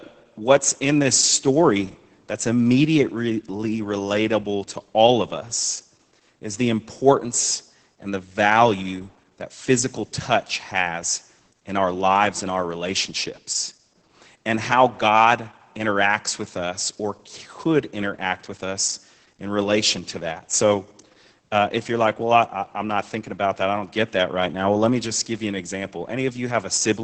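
From start to finish the speech carries heavy Opus voice compression. Content stops near 8 kHz, as with wideband SILK coding, and the excitation is coarsely quantised, which fits a bitrate around 10 kbps. The speech sounds muffled, hoarse and slightly robotic.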